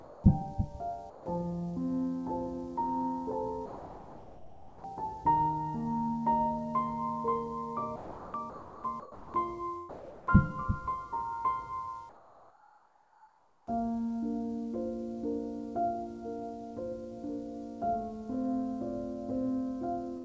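The sound cuts out to steady, featureless noise four times: from the start to 0.24 s, 1.10 to 1.26 s, 3.66 to 4.84 s (the longest, at nearly 1.2 s), and 9.89 to 10.27 s. That's sound dropped by the voice detector, likely because the sender misjudged quiet parts as background and stopped sending, so comfort noise was filled in. Between 7.96 and 9.34 s the sound is chopped by the voice detector. The sender likely kept toggling on and off, so about 1.06 s of that stretch turns into comfort-noise patches. From 12.09 to 13.67 s there's comfort noise in place of the background, likely from discontinuous transmission. The real background, sitting about 25 dB under the loud parts, becomes a flat hiss about 6 dB quieter. Everything above 8 kHz is missing, which fits a G.722 call path at 64 kbps.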